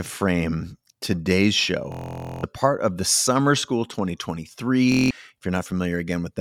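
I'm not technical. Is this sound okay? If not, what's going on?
No. This speech has Bluetooth stutter: the wireless link dropped audio, and the receiver kept replaying its last tiny slice. After "frame today's" (1.92 to 2.43 s) and again at 4.92 to 5.11 s you hear a buzzy, machine-gun repeat, then the speech jumps ahead.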